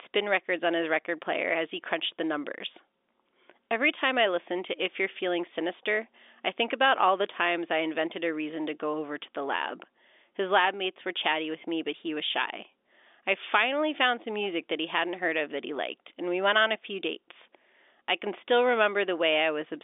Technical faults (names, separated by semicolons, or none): none